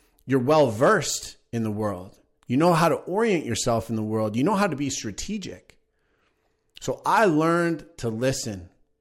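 No technical faults can be heard anywhere in this recording.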